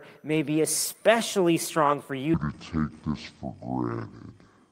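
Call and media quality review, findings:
Section at the wrong speed, 2.34 s to end: speech slows to 0.53x, roughly ten semitones deeper and dragged. Likely playback or resampling run at the wrong clock rate.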